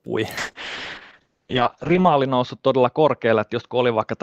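From 0.39 s to the end of the clip, a call bitrate drop hits: the connection's bandwidth estimate collapsed and the encoder was pushed from 32 kbps down to 7 kbps, sitting at the floor for about 1.8 s. Starved of bits, it coded the speech far more coarsely and narrowed the audio band from 20 kHz to 8 kHz, so the sound turns muffled and dull, with a rough, watery texture that never recovers.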